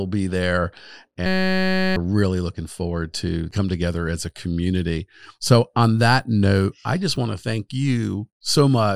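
From 1.26 to 1.96 s, right after "be there", the speech gives way to a steady buzz at about 188 Hz until "really looking forward to" resumes. This is a system hang loop. The computer or its audio driver stalled while the sound hardware kept replaying one 5.33 ms slice of its ring buffer, over a hundred times. The short loop fits a 256-sample buffer, and roughly 0.7 s of speech is lost.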